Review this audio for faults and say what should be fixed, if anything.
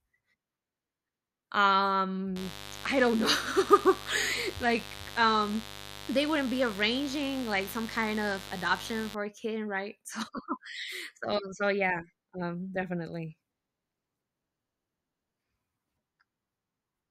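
A mains buzz runs from 2.36 to 9.15 s, ending just before "a kid right", roughly 15 dB below the speech. Sharp switching spikes twice in every 50 Hz cycle spread harmonics into the kilohertz range, so it sounds raspy rather than like a smooth low hum. Shielding the cable and moving away from dimmers or rectifiers would prevent it.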